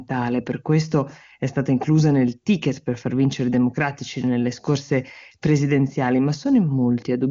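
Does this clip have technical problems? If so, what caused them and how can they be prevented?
No, the speech comes through the AMR wideband (HD Voice) codec path as expected, with content stopping around 7.4 kHz as that wideband channel dictates, so there is nothing to trace or prevent.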